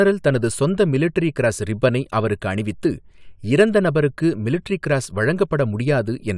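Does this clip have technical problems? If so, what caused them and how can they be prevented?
No, this speech clip has no technical problems. There is nothing here to trace to a cause or to prevent.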